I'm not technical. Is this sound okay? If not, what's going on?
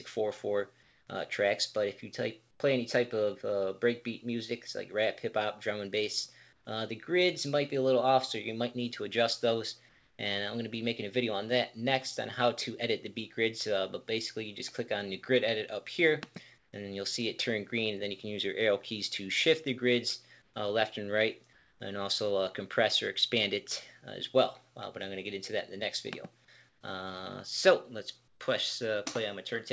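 No. During quiet moments, the sending side likely stopped transmitting and the receiver filled the gaps with made-up hiss. This is called comfort noise in place of the background. The real background is briefly swapped for a flat, featureless noise, often a little quieter, at 0.83, 2.51, 6.53, 9.89, 16.58, 20.42, 26.69 and 28.28 seconds, each lasting about a tenth to four tenths of a second. Throughout, the call audio also has no sound above 8 kHz.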